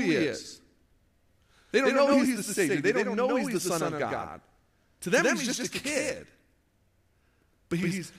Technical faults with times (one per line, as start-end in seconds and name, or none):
0.00-8.18 doubled audio track